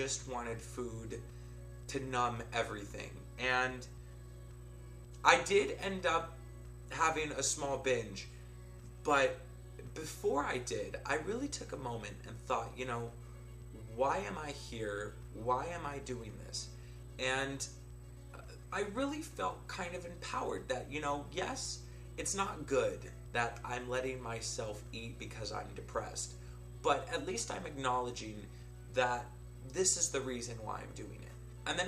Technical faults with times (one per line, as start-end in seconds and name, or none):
0.00-31.87 mains hum